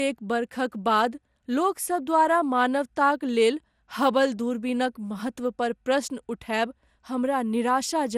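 The speech sounds swirly and hollow throughout, with blurred attacks and nothing above 16 kHz. This fits generation loss, likely from about seven passes through MP2 at 96 kbit/s.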